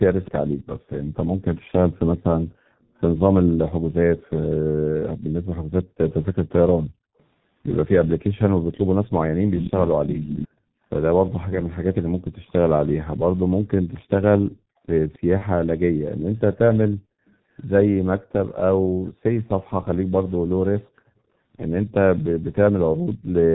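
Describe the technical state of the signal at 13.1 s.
At 13.1 s the G.723.1 codec damage is heavy, as it is across the whole clip. This low-rate telephony codec, here at 6.3 kbit/s, codes the speech in coarse 30 ms frames. Nothing passes above 4 kHz. Speech sounds muffled and hoarse, and consonants smear.

An echo leak runs from 6.11 s to 21.09 s. A delayed copy of the speech trails the original by 264 ms, roughly 10 dB down. The likely cause is a far-end loudspeaker whose echo canceller let part of the playback back into its microphone.

Background gated by the echo canceller falls between 12.01 s and 13.66 s. The canceller clamped the microphone while its loudspeaker played. The room sound dips by up to about 40 dB, for around half a second in total, then returns.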